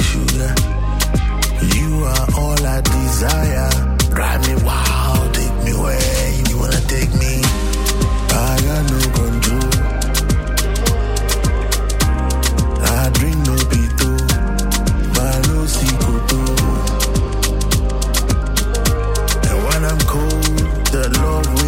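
A likely dropped buffer (overrun), with samples overwritten before being read, makes the sound skip a few milliseconds ahead at 15.97 s and again at 18.31 s.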